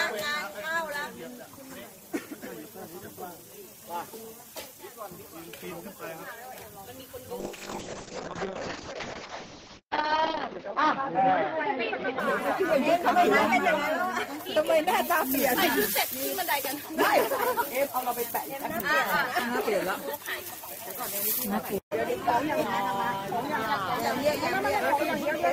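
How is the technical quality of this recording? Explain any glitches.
The recording has one clear glitch, a call bitrate drop from 7.41 s to 12.49 s. The encoder was told to spend far fewer bits, which points to a fall from roughly 32 kbps to about 6 kbps. Coarser coding and a top end cut from 20 kHz to 8 kHz make the sound muffled and watery, worst for about 3 s before recovering.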